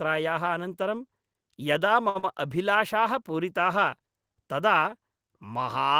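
Speech, and right after "अनन्तरं यदा" there's a short stall from a late packet at 2.09 to 2.17 s: about 56 ms of the last sound is held while waiting, nothing lost, just a 56 ms shift. Then comes short concealed packet loss at 2.19 to 2.25 s, where 40 ms never arrived and roughly 37 ms of continued sound papers over it with a brief smear.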